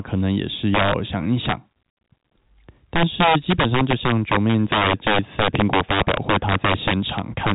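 Throughout the speech, a gain stage drives the signal about 9 dB past the integer limit, and instead of clamping, those peaks wrap to the opposite sign. The integer overflow turns a small share of loud moments into harsh, violent cracks, sharper than clipping, over band-limited audio with nothing above 3.8 kHz.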